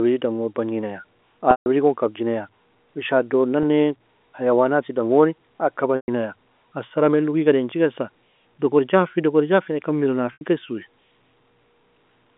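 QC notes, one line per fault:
1.51–1.66 s, 3.63 s, 5.96–6.08 s, 10.33–10.41 s, packet loss with pitch repetition: Audio drops out for 150, 10, 120 and 80 ms. The receiver fills each gap by looping the last pitch cycle and fading it over about 50 ms. The 3.63 s gap is a brief buzzy hold. The longer gaps, after "dangon bagni naya" and after "jafi na ikan mira", fade to silence before a short cross-fade brings the speech back at "gon kabji naya in" after the first. On a spectrogram the harmonics freeze into flat lines, then fade to a blank patch. The waveform shows identical repeated cycles shrinking to zero. The durations fit 10 ms packets.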